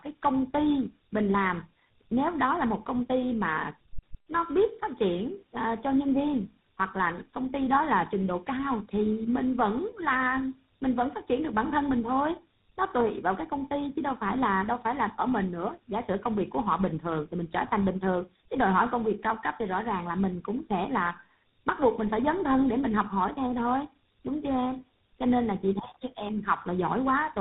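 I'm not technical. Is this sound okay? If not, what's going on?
No, there's tandem speech coding the whole way through: the speech sounds rough, muffled and warbly, as if squeezed through three different phone systems in a row.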